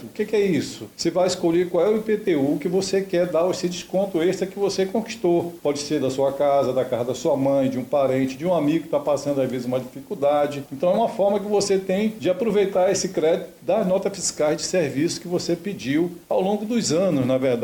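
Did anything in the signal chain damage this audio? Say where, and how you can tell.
No, nothing in the signal chain audibly damaged this audio. No stage, from capture through to playback, left any mark I can point to.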